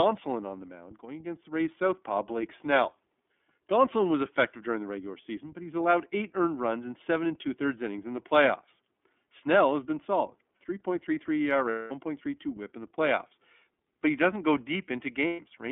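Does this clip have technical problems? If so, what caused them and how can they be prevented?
Yes. The speech sounds slightly rough and synthetic, with nothing above 3.4 kHz and little below 250 Hz, from the iLBC codec. It rebuilds each frame's excitation independently at a low rate, which fits its 13.33 kbps, 30 ms mode. Using a wideband codec such as Opus, where both ends support it, would avoid this.

At 11.69 to 11.92 s, just before "whip in the playoffs", and at 15.27 to 15.40 s, the sound turns into a held, buzzy vowel. These are lost iLBC frames: the decoder repeats the last pitch cycle with noise for about 210 ms and 120 ms, which points to seven and four missing 30 ms frames. Speech recovers immediately afterwards. A more reliable network path, packet redundancy or forward error correction would prevent these gaps.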